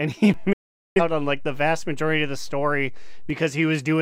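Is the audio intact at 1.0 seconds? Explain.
No. At 1.0 seconds the receiver is in a digital broadcast dropout. It lost the digital signal or rejected frames that failed their checksum, and it muted until valid frames returned. The sound fades to silence over about 8 ms at 0.53 s and comes back at 1.01 s, so 1.0 s falls just before audio returns. About 427 ms of programme is missing, which fits roughly ten lost frames, and what was sent in that gap cannot be recovered.

The same moment also sits inside a DC step that runs from 0.34 s to 3.30 s. The waveform's zero line jumps to an offset, as happens when a converter recalibrates or an input carrying an offset is switched in. A low thump or click marks the step at 0.34 s, while the speech itself continues unchanged on top of the shifted baseline.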